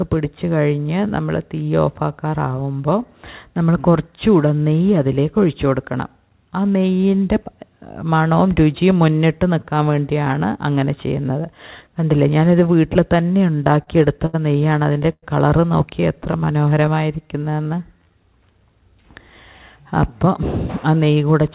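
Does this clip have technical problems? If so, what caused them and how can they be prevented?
Yes. The sound passes through a narrowband call path, with nothing above 4 kHz, which points to a G.711-type codec. Three timing faults sit on top of it.

Repeated stalls (stutter) run from 13.38 to 15.24 s. Packets arrived late, so the jitter buffer ran dry ten times. Each time the receiver stretched the last sound to bridge the gap, adding about 298 ms in total, with the longest wait 102 ms and nothing actually lost. The stretched fill covers roughly a sixth of that span, so the sound drags and stutters. On a waveform the repeated cycles show as small copied blocks, and the longer fills taper in level. A spectrogram shows short stretches of frozen, smeared harmonics. A larger or faster-adapting jitter buffer, and a network path with steadier delivery, would prevent these stalls.

Jitter buffer slow-down follows from 16.01 to 18.12 s. 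With its reserve running low, the receiver repeated single pitch periods and pause fragments again and again, adding 243 ms. Playback drops to 89% speed at unchanged pitch, so sounds come out drawn out. A spectrogram shows harmonics at the same height but stretched sideways, and the waveform shows near-identical periods repeating. Keeping packet delay stable avoids the underrun that forces this rebuild.

Jitter buffer speed-up runs from 20.02 to 21.42 s. The buffer held more audio than its target. The receiver trimmed short pieces of one or a few pitch periods to cut the delay, removing about a tenth of a second. Playback runs at 106% speed with no change in pitch and sounds slightly hurried. Spectrogram events are compressed in time at the same frequencies, and the waveform shows fewer pitch cycles than the original. Smoother network delivery without bursts, or gentler buffer adaptation, prevents this.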